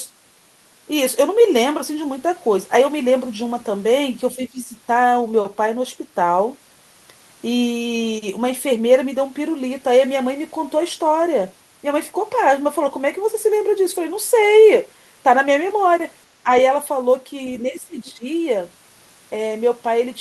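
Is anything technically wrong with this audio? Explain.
Yes. The speech has several brief suppression dips, and there is one faint fragment of another voice.

Speech suppressed in double talk occurs at 4.36 to 4.69 s, 16.43 to 16.48 s and 17.69 to 18.25 s. In each, the talker's level sinks by up to about 15 dB and then recovers. The likely cause is both ends talking at once, so the echo canceller couldn't separate near speech from loudspeaker echo and attenuated everything.

The other side's voice leaking through appears at 18.06 to 18.12 s, inside the last dip. It is a very faint scrap of a second voice, roughly 35 dB below the talker. The likely cause is residual loudspeaker echo the canceller failed to remove from the microphone. It differs from room reverberation because it is a separate voice, not a tail of the talker's own speech.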